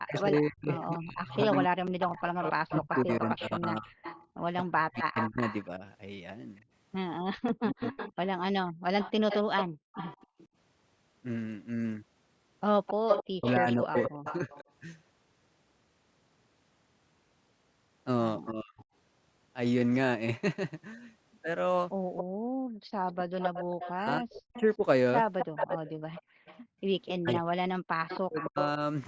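From 0.07 to 14.61 s a second copy of the voice trails the original by 262 ms, only about 5 dB quieter. This echo leak is likely a loudspeaker on one side whose echo canceller let part of the microphone pickup through and sent it back.

Over the same opening stretch, 0 to 7.94 s, the voice dips by as much as about 40 dB and drops out in pieces, around four seconds in total. This is speech suppressed in double talk, likely because the canceller could not separate the talker from the loudspeaker echo while both were active, and so pulled everything down.

The room tone briefly sinks at 4.27 to 4.39 s, by about 12 dB, and then more deeply at 8.72 to 10.38 s, by about 38 dB. That is background gated by the echo canceller, which clamps the microphone hard while the loudspeaker plays and releases it afterwards.

The double-talk cutting returns at 13.36 to 14.54 s and again, briefly, at 18.5 to 18.8 s. 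A faint echo scrap, about 35 dB down, sits at 18.78 to 18.84 s.

The strong echo resumes from 22.16 to 28.48 s, at the same 262 ms delay and about 5 dB below the voice. The room tone gates out at 22.24 to 22.91 s and at 26.22 to 26.8 s, each time by about 37 dB, and the speech is suppressed again in pieces from 23.94 to 28.8 s. Throughout, the call microphone processing caps the sound at 8 kHz.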